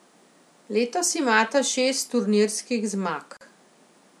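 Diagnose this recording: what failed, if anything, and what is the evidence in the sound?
The speech drops out abruptly at 3.37 s and resumes at 3.41 s, right after "imata šest turnirskih": a 41 ms hole of silence with smeared edges, after which the sound picks up exactly where it stopped. This is a gap at a join of encoded pieces, a codec-stage fault. The audio was encoded in separate segments, here about 4 s long, and joined untrimmed, so the encoder's start-up delay and final-frame padding remain as silence at the seam.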